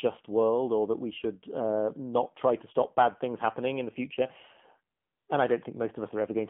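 The whole clip runs through the AMR narrowband mobile codec: nothing above 3.4 kHz, buzzy synthetic speech, and damage consistent with roughly 7.4 kbps. From 4.96 to 5.28 s, AMR comfort noise fills about 320 ms where speech frames stopped, swapping the real background for smooth, steady hiss.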